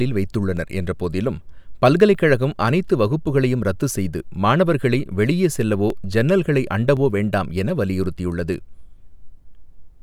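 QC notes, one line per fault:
0.57–9.10 s, clock drift buffer slips: about ten brief clicks recur at a steady 1.07 s interval while the speech runs. The likely cause is two devices on independent clocks that disagree by several hundred ppm, so the buffer between them gradually drifts until it must drop or repeat a small block, apparently a few dozen samples. Each slip breaks the waveform's continuity and is heard as a click, and the regular spacing reflects the constant drift rate.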